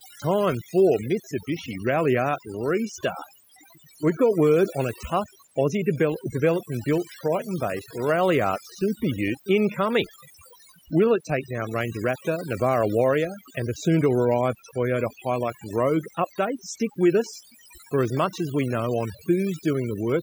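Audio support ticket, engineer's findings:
Overdone noise removal, present throughout the speech. Background pulled down, with twinkling specks left where noise was. Probable component: noise reduction stage set too aggressive. Mechanism: frequency bands falling near the noise estimate are cut hard or gated off, taking low-level speech detail with them. Residual isolated bands flicker on and off, producing the specks.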